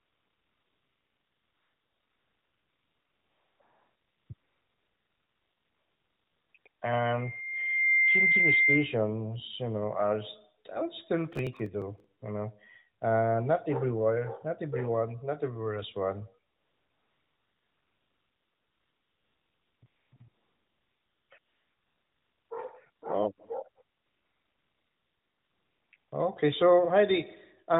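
From the start to about 6.8 s, the phone's transmitter judges the line silent and stops sending speech frames. AMR comfort noise fills those gaps with a smooth, synthetic hiss that switches in and out at about 3.6, 4.3, 6.5 and 6.7 s.

From 7.03 to 9.01 s, just before "you know", the microphone picks up its own loudspeaker and the loop gain exceeds one at 2.1 kHz. This loudspeaker feedback squeal swells over roughly a second into a piercing tone about 5 dB above the speech.

From 11.32 to 12.04 s, right after "are still", the processor misses a long run of deadlines. The missed buffers, each around 1.5 ms, are simply skipped. This processor overload crackle sounds like gritty, tearing crackle over the speech.

A 20 ms comfort-noise patch follows at 12.20 s.

From 16.52 to 26.12 s, beginning after "not everywhere is one", comfort noise returns in repeated stretches lasting from 40 ms up to 3.3 s. 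The real background gives way to steady synthetic noise.

Throughout, the AMR narrowband codec limits the sound to below 4 kHz.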